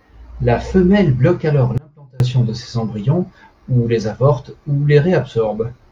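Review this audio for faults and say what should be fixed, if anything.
An audio dropout to a faint residue occurs from 1.78 to 2.20 s. The speech cuts out abruptly after "femelle bloque alors" and returns mid-flow at "de ses embryons ou". For about 0.42 s only a faint sound remains, roughly 30 dB below the normal level. The path stayed live, so the likely cause is a brief loss of the wanted signal upstream. Secure connections and monitor the feed so that breaks are caught during capture.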